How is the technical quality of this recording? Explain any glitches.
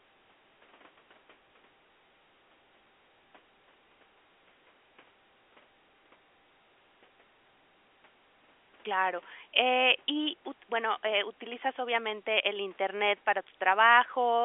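No audible glitches or faults.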